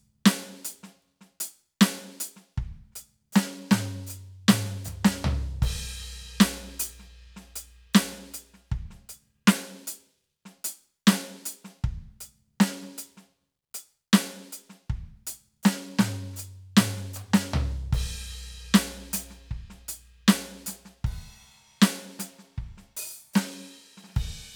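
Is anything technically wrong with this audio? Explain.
No, nothing technically wrong stood out on listening to this music.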